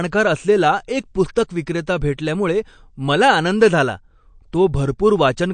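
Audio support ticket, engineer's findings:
MP3 compression, throughout: watery, swirly texture on the speech, with nothing above 9.1 kHz and plainly audible codec damage. Likely cause is an MP3 encoder starved of bits, consistent with a low rate around 48 kbps, cutting the treble at a fixed point and dropping weak spectral lines that flicker frame to frame.

Pre-echo, 1.35 s (just after "असलेला एक") and 2.17 s: brief hiss of about 10 ms ahead of each sharp onset, attack softened. Block-based codec spreads quantisation noise across the whole block, so noise sized for the loud attack leaks into the quiet gap preceding it.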